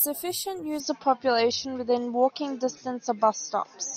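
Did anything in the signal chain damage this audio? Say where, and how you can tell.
Yes. At 0.8 s the speech turns duller, with nothing above 6.7 kHz. The level shifts by roughly 5 dB, and a new noise floor appears about 40 dB down. There is no gap. This points to the input likely being switched to a poorer device at the capture stage.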